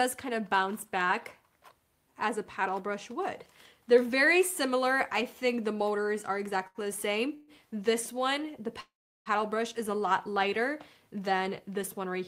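A sound at 6.67 to 6.78 s is held too long for about 74 ms with a slight buzz or dip. This is a short stall from a late packet: the jitter buffer ran dry, the receiver stretched the last sound, and nothing is lost. Later the audio freezes twice, each time continuing as a fading buzz or hiss before resuming where it stopped. The first freeze runs 7.35 to 7.51 s, for about 128 ms, with no silence. The second runs 8.80 to 9.29 s, for about 453 ms, and its fading sound gives way to roughly 360 ms of silence. These are call audio freezes, likely from packets held up in transit, and each one pushes the rest of the audio later.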